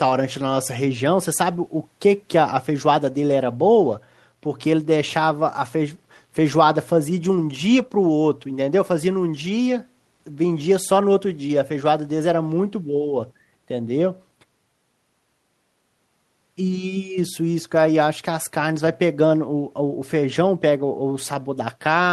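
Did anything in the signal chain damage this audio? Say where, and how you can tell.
No, nothing in the signal chain has audibly damaged this speech recording; no stage leaves any trace of a fault in the signal.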